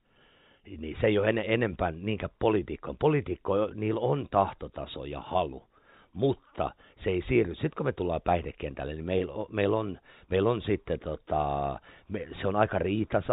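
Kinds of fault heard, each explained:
Packet loss with pitch repetition: At 9.18 to 9.20 s the speech briefly holds and turns faintly buzzy, a tiny frozen moment rather than a drop into silence. About 20 ms is missing, which fits a single lost packet. The receiver bridged the hole by repeating the last pitch period it had received, so the waveform cycles in place until fresh audio arrives. This happens within the narrow telephone band left by the G.711 coding.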